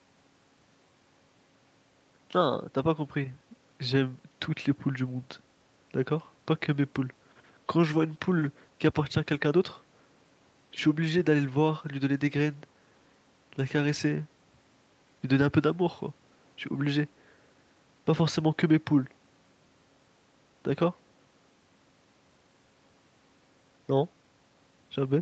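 Listening to this speech recording, nothing stood out as a technical problem.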